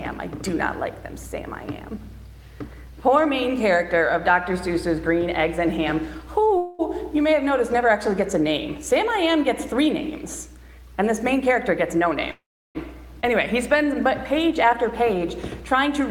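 Call audio freezes at 6.57 to 6.81 s and 12.31 to 12.77 s interrupt this audio: the last sound is stretched into a fading buzz, briefly at first, then for 440 ms with about 350 ms of silence, before playback resumes where it stopped, likely because packets were delayed and the jitter buffer ran dry. A jitter buffer speed-up from 11.01 to 12.04 s runs at 105% by trimming pitch-period pieces, roughly 50 ms in total, and a second from 15.74 to 16.01 s at 111% removes some 40 ms, so the sound feels hurried at unchanged pitch. A skip ahead at 13.21 to 13.25 s jumps forward over roughly 200 ms of audio, joining the two sides with only a 20 ms bridge. A jitter buffer slow-down from 13.27 to 15.20 s plays at 95% by repeating pitch periods, adding 102 ms and drawing sounds out at the same pitch.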